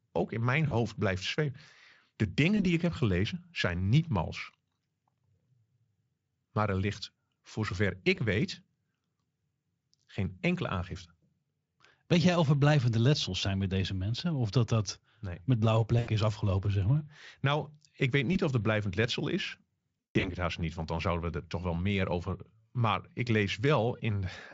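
Dutch speech with VoIP packet loss concealed by the speech codec, as brief buzzy or noisy, fading smears at 0.67 s (after "ook in mijn"), 2.57, 8.15, 16.0 s (after "dat dat met blauwe"), 18.33 and 20.0–20.31 s (after "er blijvend letsel is"). Each gap is 20 to 200 ms. The last is the worst, with about 200 ms missing and a 160 ms stretch where the decoder extrapolates and decays before the Speex coding recovers.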